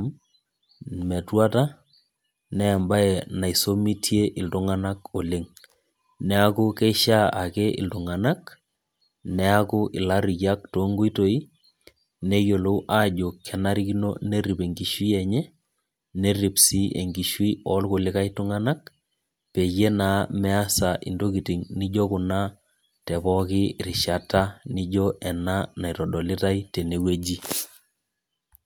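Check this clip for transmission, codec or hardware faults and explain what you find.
Listening to the speech here turns up no transmission, codec or hardware faults anywhere in the signal.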